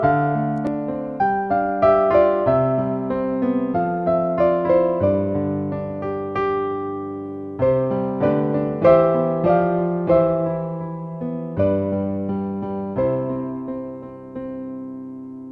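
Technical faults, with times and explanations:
No technical faults can be heard anywhere here.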